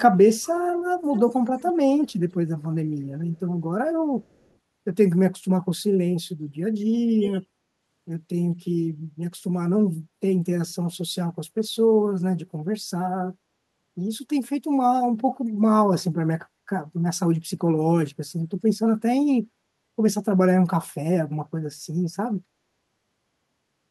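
Echo leak appears at 0.4–0.5 s, 1.1–1.73 s, 2.02–2.12 s, 4.23–4.51 s and 7.21–7.33 s: a copy of the speech trailing it by 214 ms. The likely cause is a loudspeaker at the far end whose echo canceller let part of the replayed signal back into the microphone. The scraps vary widely, from barely audible to a clear ghost near 7.2 s, roughly 15 dB below the speech.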